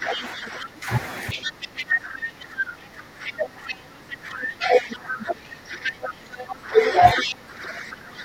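Speech suppressed in double talk runs from 0.0 to 0.89 s and again from 1.34 s to the end, with the talker's level dipping by around 15 dB. This likely comes from an echo canceller that could not tell the near talker apart from the loudspeaker echo while both sides spoke, so it pulled the whole microphone signal down. The other side's voice leaking through appears at 0.13–0.24 s, 1.3–1.84 s, 3.26–3.3 s, 3.68–3.74 s, 5.84–5.91 s and 7.21–7.34 s. These are short scraps of a second voice sitting roughly 10 dB under the speech in the first four and only about 5 dB under it in the last two. That is likely far-end audio from the loudspeaker that the canceller failed to subtract fully from the microphone pickup.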